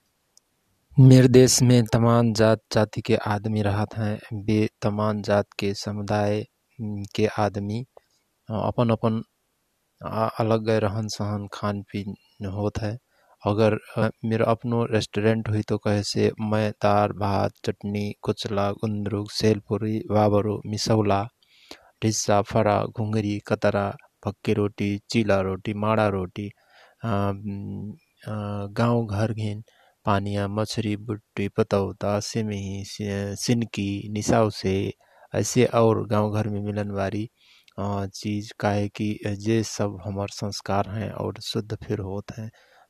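Damaged data in the compressed stream shows up at 14.02 s as a brief disturbance cutting into the speech, lasting about 14 milliseconds. At that point the bytes in the encoded file were corrupted, so the decoder could not read the affected frame as valid audio. It searched for the next intact frame header and regained sync, which is why the disturbance is so short.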